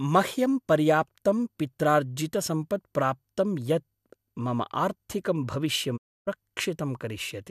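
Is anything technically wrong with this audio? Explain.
Yes. Digital broadcast dropout, 5.96 to 6.29 s: the receiver muted on lost or corrupted frames, fading the speech out within 20 ms and losing 288 ms of programme.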